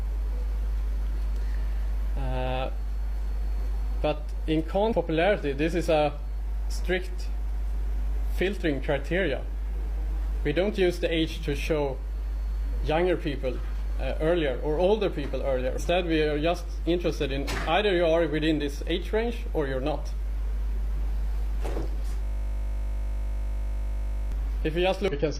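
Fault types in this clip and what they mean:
Damaged data in a compressed stream: Brief chirps or blips, each about 50 ms, at 4.88, 15.75 and 25.08 s. Corrupted bytes in the compressed stream made the decoder misread frames, lose sync and hunt for the next valid frame header before sound resumed.
System hang loop: A steady 50 Hz buzz from 22.23 to 24.32 s, where one 20 ms slice of audio repeats about a hundred times. The system stalled while the sound hardware kept replaying the same short ring buffer.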